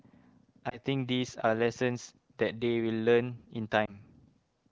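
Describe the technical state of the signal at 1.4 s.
At 1.4 s the speech is intact, passing through the AMR wideband (HD Voice) codec at a rate high enough to keep it clear, with no fault at that point.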